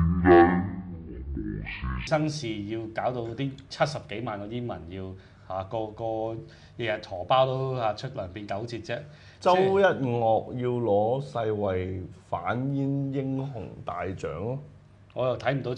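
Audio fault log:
0.00–2.07 s, stereo read as mono: the sound drags at half speed and sits a full octave (12 semitones) low, with a faint mirrored copy in the upper spectrum, because interleaved left and right samples were read back one after another as a single channel.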